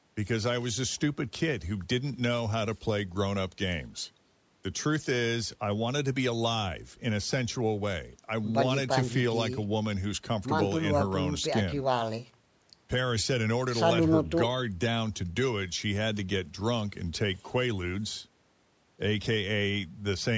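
No technical faults can be heard in the speech, which shows only the normal marks of call microphone processing: the lowest bass is trimmed away and nothing reaches above 8 kHz.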